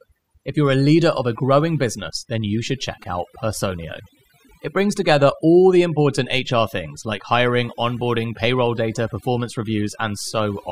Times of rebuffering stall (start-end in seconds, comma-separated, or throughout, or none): none